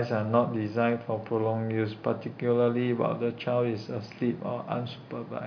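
No technical faults can be heard anywhere in the speech recording; the signal stays continuous and steady throughout.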